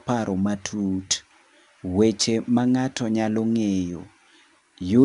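Throughout, the speech carries 4-bit ADPCM compression. Each sample is a 4-bit step from a prediction. Gritty hiss follows the level. Nothing sounds above 10.7 kHz.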